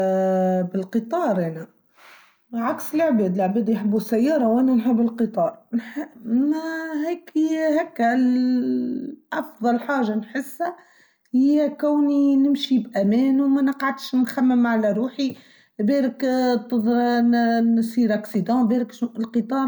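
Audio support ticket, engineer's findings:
No technical faults found in the speech signal: level, continuity and timing hold steady throughout, with no defect audible at any point.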